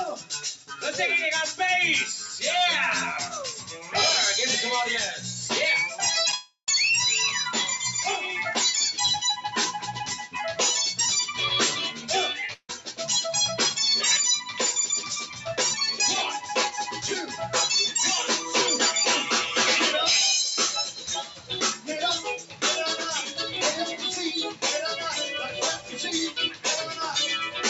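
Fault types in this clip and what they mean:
Noise suppressor applied to music or sounds: A suppressor built for speech stays active across the whole clip. It treats steady, held or ambient parts of the sound as noise and pulls them down, while sharp onsets pass through. The level therefore swings by about 5 dB from moment to moment. The sound pumps and thins as sustained passages sag between attacks.
Sound cut by the noise suppressor: At seven points the suppressor digs deeper than its usual swing. These are 0.16 to 0.84 s, 2.2 to 2.43 s, 3.48 to 3.94 s, 11.94 to 12.95 s, 15.26 to 15.46 s, 20.86 to 22.62 s and 25.49 to 26.98 s. Drops reach about 5 to 10 dB. The longest stretches lose the most, around 10 dB, as steady or decaying sound is mistaken for noise and sinks.
Short concealed packet loss: Two 10 ms pieces of audio went missing back to back, at 6.30 and 6.31 s. The receiver patched the gap by extending the preceding sound, then crossfaded into real audio again. 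It comes across as a tiny smear or wobble lasting only a few hundredths of a second. It sits right before the longer gap that follows.
Long network dropout: Two longer holes appear. From 6.35 to 6.68 s about 330 ms is lost. The last sound is stretched into a fading buzz or hiss, then about 80 ms of silence follows before the audio resumes further on. At 12.53 to 12.70 s about 150 ms vanishes the same way, ending in about 50 ms of silence, inside a suppressor dip. The likely cause is packets not arriving over the network.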